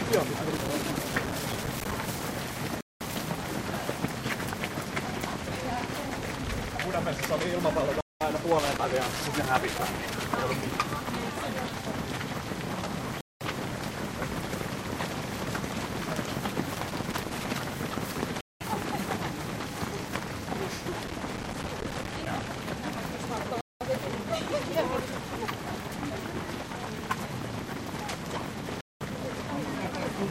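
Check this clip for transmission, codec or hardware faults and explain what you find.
Two faults are present: intermittent loose connector crackle and a regular gap between chunks.

Loose connector crackle occurs four times: 0.56 to 1.92 s, 8.59 to 10.24 s, 16.74 to 17.51 s, and 20.93 to 22.48 s. Each burst lasts between about 0.8 and 1.7 s. A worn or dirty contact somewhere in the signal path is intermittently opening and closing, so the audio is chopped on and off at an irregular rate. The result is an uneven scratching crackle laid over the sound, not a steady noise.

The gap between chunks appears as a 200 ms hole at 2.81, 8.01, 13.21, 18.41, 23.61 and 28.81 s. The spacing is exactly 5.2 s, which points to audio handled in 5-second chunks with a stretch of silence inserted at each join. No material is dropped. Playback simply stops and restarts, so each hole has abrupt edges, and the interruptions come back at a fixed interval.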